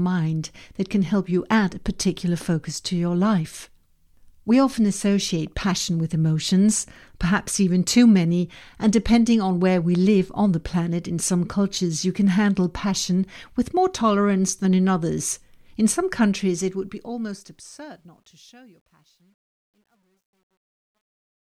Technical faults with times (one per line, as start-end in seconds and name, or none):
16.39-21.46 truncation distortion on a fade